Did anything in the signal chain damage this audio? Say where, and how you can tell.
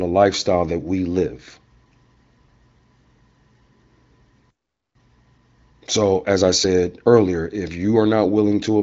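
Yes. A playback stall silences the speech from 4.50 to 4.95 s. The likely cause is a player buffer underrun.

Time-compressed catch-up follows at playback from 4.95 to 7.95 s. The speech runs 1.1 times fast with unchanged pitch, unlike a resampled speed-up.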